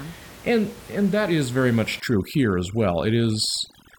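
From 2.0 s to the end, overdone noise removal takes hold: an aggressive suppressor zeroes any frequency band near its noise estimate, so the room noise, about 21 dB below the speech, collapses into twinkling specks. Quiet parts of the voice are cut along with it, and the spectrogram shows scattered isolated dots and holes.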